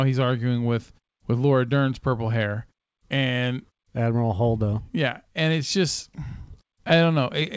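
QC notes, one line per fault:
No faults found in this speech clip. The audio stops at 8 kHz, as a wideband call codec would leave it, and the background drops to silence in the pauses before returning with the next sound.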